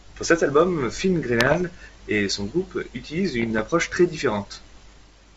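Speech carried over a G.722 wideband link shows bit errors on an ADPCM link, with bits flipping at a rate of roughly 0.7 percent from 1.39 to 1.65 s, just before "et son groupe utilise", and at roughly 0.5 percent from 3.40 to 3.68 s, right after it. Each flipped bit knocks the decoder's step size and predictor off track, so the damage rings on briefly as pops, rough bursts and sudden level jumps, heard against the light upper-band hiss of what sounds like full-rate G.722.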